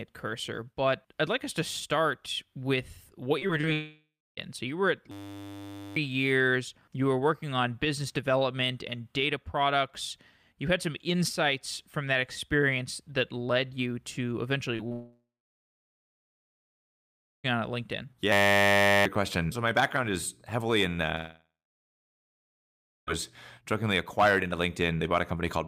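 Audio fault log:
3.39–3.65 s, repeated packet loss (robotic sound): three short gaps, the longest about 21 ms, land in a quarter-second span, and about 22% of it is patched over. Each gap is filled by stretching the sound just before it, so the audio turns choppy. On a spectrogram, short smeared blocks with flattened harmonics break up the normal texture. The waveform shows brief stretches that are too regular.
3.73–4.39 s, 14.92–17.46 s, 21.16–23.09 s, long network dropout: the sound cuts out for about 0.64 s, 2.52 s and 1.92 s respectively, most likely because the network stopped delivering audio. Each time, the last sound carries on as a fading buzz and then gives way to silence lasting about 0.28 s, 2.19 s and 1.6 s. The audio then resumes with that stretch missing. A spectrogram shows a decaying smear and then a blank band. The waveform flattens to near zero.
5.11–5.96 s, 18.32–19.05 s, system hang loop: a single 10 ms slice of audio repeats exactly, 85 times and then 73 times, while the playback buffer keeps cycling. 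The result is a steady 100 Hz buzz, and roughly a second and then about 0.7 s of real audio are lost. On a spectrogram this is a rigid comb of harmonics at multiples of 100 Hz. The waveform shows identical 10 ms cycles repeating.
14.77–14.81 s, 14.89–14.92 s, short concealed packet loss: two 20 ms pieces are missing and filled by continuing the preceding sound before it blends back in. Each is heard as a brief smear or wobble, and the second runs straight into the long dropout. On a spectrogram each appears as a thin vertical patch of blurred, frozen harmonics. The waveform shows a slight discontinuity where the filled section joins the real signal.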